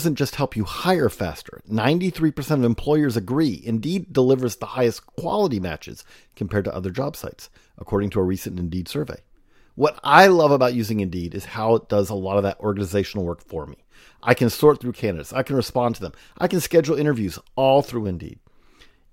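No technical faults can be heard anywhere in the recording; the signal holds steady throughout.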